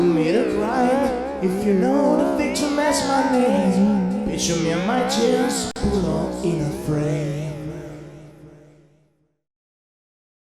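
Two separately encoded pieces were joined without trimming the encoder delay and last-frame padding, leaving a gap at a join of encoded pieces: the sound drops into a 47 ms silence from 5.71 to 5.76 s, with smeared edges, then resumes where it stopped.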